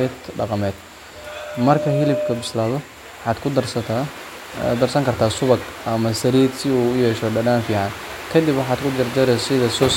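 Loudspeaker feedback squeal runs from 1.15 to 2.64 s. A single 602 Hz tone swells up over under a second and settles at roughly the level of the speech. The microphone is picking up its own loudspeaker, and at that frequency the loop gain tops one.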